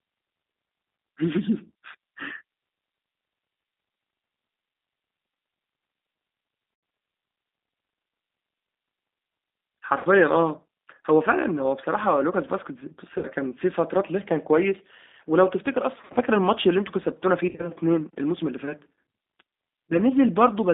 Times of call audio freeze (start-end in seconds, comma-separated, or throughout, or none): none